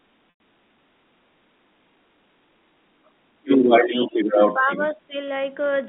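Throughout the speech a 50 Hz buzz rides under the signal. The filter restarted on every block, starting each one from silence, so every block opens with a small transient. On the waveform these show as evenly spaced ticks, and on a spectrogram as thin vertical lines every 20 ms that grow stronger as the level rises.

From 0.30 to 0.40 s there is packet loss with pitch repetition. About 100 ms went missing, which fits five 20 ms packets. The receiver looped the last pitch period, so the sound holds briefly on a buzzy, slightly frozen tone, then fades into silence before the speech returns with a short cross-fade. A spectrogram shows flat, unchanging harmonics there, and the waveform shows identical repeating cycles.

From 2.95 to 3.19 s the speech is suppressed in double talk, dipping by around 25 dB at its deepest. The likely cause is an echo canceller turning the talker down while both sides spoke. 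The waveform envelope sags sharply, and the spectrogram thins.

From 3.42 to 4.92 s the other side's voice leaks through, about 10 dB below the talker. It is likely residual loudspeaker echo. It shows as a second, fainter harmonic pattern overlapping the main one.

The talker is suppressed again, from 4.07 to 4.69 s by roughly 10 dB and from 4.94 to 5.15 s by about 15 dB. Both appear as patchy energy dips in the spectrogram.

All of this sits inside the telephone band, which ends near 3.6 kHz.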